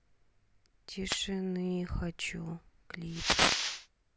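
At 1.06 to 1.19 s and again at 3.06 to 3.86 s, wireless microphone noise hits appear: the FM radio link fades, receiver hiss rises as a static swish, and a spectrogram shows broadband noise bands with matching waveform fuzz.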